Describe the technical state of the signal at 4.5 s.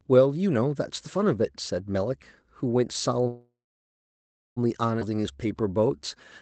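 At 4.5 s the audio sits inside a call audio freeze spanning 3.27 to 4.59 s. A stall, likely in packet delivery, emptied the jitter buffer, so the receiver stretched the last sound into a fading buzz and then about 1.03 s of near-silence. At that moment a waveform shows a flat line and a spectrogram shows a blank band before the speech resumes intact, delayed by about 1.29 s, with its content still capped near 8 kHz by the codec.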